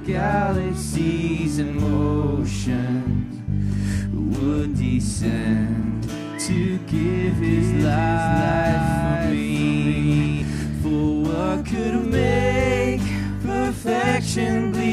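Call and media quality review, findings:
Doubled audio track, 7.24–10.42 s: full-band copy about half a second late, roughly 5 dB down, dry, abrupt on/off. Likely second capture path or misaligned edit.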